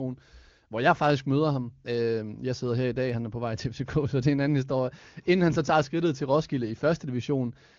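No technical faults can be heard in the speech, which comes through the AMR wideband (HD Voice) codec.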